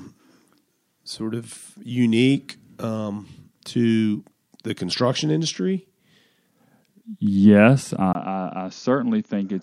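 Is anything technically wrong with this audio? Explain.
Yes. At 8.13 s the input likely switched to a poorer device, and the final stretch of speech is captured through a different, band-limited microphone path. This replacement path cuts everything above 6.8 kHz, so from that point the sound turns dull and boxy. A brief 20 ms gap of silence marks the switch, the level drops by roughly 10 dB, and a faint new background noise sits well below the signal until the end.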